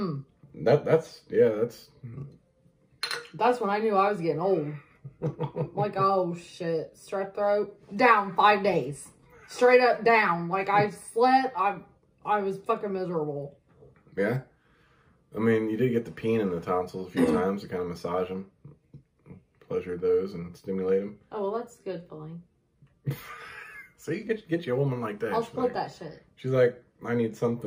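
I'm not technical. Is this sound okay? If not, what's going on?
No. Throughout the clip there is sample clock jitter: the timing that tells the equipment when to capture each tiny slice of sound wobbles slightly, by around a millionth of a second. That adds a faint hiss or roughness. Unlike ordinary background hiss, which stays constant, this one follows the sound, growing on loud or bright, sharp moments and disappearing whenever the audio goes quiet.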